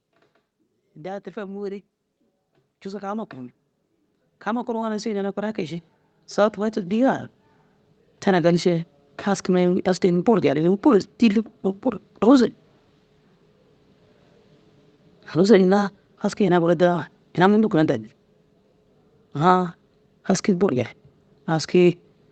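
From 0.8 s to 10.16 s, automatic gain rising lifts the level by about 18 dB as the control keeps adding gain to a quiet input. Unlike a talker moving closer to the microphone, the background noise swells together with the speech, slowly, across the whole stretch.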